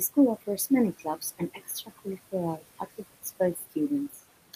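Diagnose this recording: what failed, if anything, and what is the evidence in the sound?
The room noise, which sits about 16 dB below the speech, pumps down between phrases and swells back under them. These are noise suppressor artifacts from call processing: the suppressor attenuates bands it judges steady noise by about 16 dB, frame by frame.

Speech cut by the noise suppressor makes soft sounds come out swallowed from 0.93 to 2.33 s, just before "activities for", dropping up to about 15 dB across under half a second in total. It happens again at 3.55 to 3.73 s, right after "activities for", at about 13 dB, and at 4.1 to 4.2 s at about 11 dB. In the same call-processing stage, the suppressor mistook these quiet speech parts for noise and turned them down with the background.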